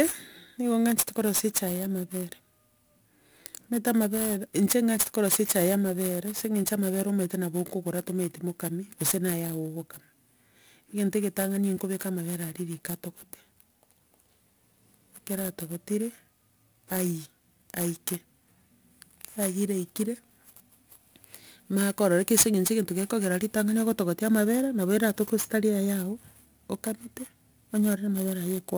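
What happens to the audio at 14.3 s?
At 14.3 s the speech carries crude rate conversion, a fault present across the whole clip. The pattern fits a jump from 32 kHz to 44.1 kHz done by simply repeating the nearest sample, with no filtering. The uneven repeats follow a cycle set by the two rates. They create tones unrelated to the speech. The result is a gritty, inharmonic fizz riding on louder and brighter sounds, strong and not far below the speech itself.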